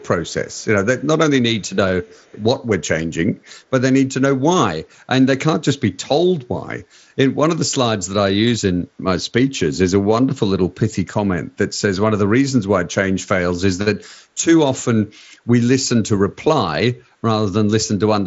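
From 0.26 to 0.65 s, 1.61 to 1.7 s and 2.04 to 2.43 s, a delayed copy of the speech returns about 289 ms after the original, at roughly 35 dB below the speech in the first stretch and roughly 40 dB below in the other two. This is an echo leak, likely from a far end playing the call on a loudspeaker whose echo canceller let part of the microphone pickup through and sent it back. The echo sits inside the same band-limited signal as the rest, with nothing above about 7.7 kHz from the mSBC headset path.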